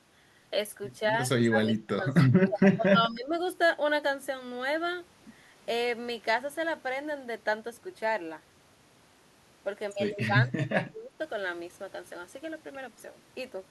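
From 1.49 to 3.35 s the speech drops sharply in level, sinking by roughly 25 dB over about one and a half seconds of that span. A shallower repeat follows from 10.27 to 11.19 s, with a dip of around 20 dB affecting most of the stretch. This pattern is likely speech suppressed in double talk: an echo canceller, unable to tell the near talker from loudspeaker echo, attenuated both.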